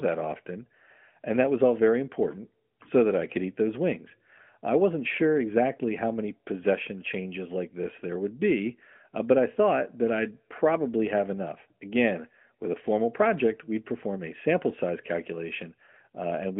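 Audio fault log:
No faults heard anywhere in this recording.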